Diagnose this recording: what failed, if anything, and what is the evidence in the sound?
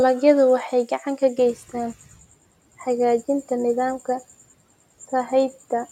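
Just after 1.4 s the background noise under the speech jumps and pushes through with little reduction, then gradually sinks over the next 0.9 s or so, settling by 2.26 s. This is the noise suppressor catching up, in the call-processing stage. The room noise climbs by about 24 dB at around 1.5 s, and the suppressor's noise estimate trails behind it. Once the estimate adapts, over roughly 890 ms, the suppressor cuts the noise by about 11 dB.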